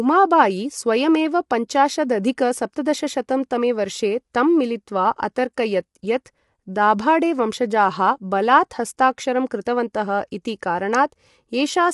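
Low-delay AAC compression runs from start to end. The speech sounds plainly rough and grainy, with noise filling the gaps between harmonics and nothing above 11.6 kHz. This is likely AAC-ELD, whose short frames resolve pitch poorly, at a level of damage that fits a bitrate near 32 kbps.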